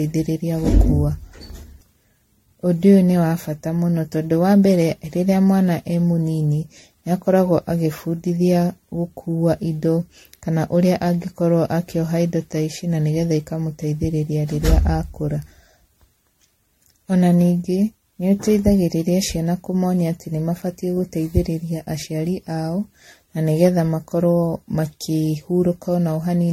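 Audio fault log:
throughout: generation loss. The speech sounds swirly, hollow and smeared, with blurred consonant attacks. This is likely from around ten repeated low-rate MP3 encodes, each requantising on a shifted frame grid. A spectrogram shows a hard ceiling at 16.5 kHz and flickering holes across the upper bands.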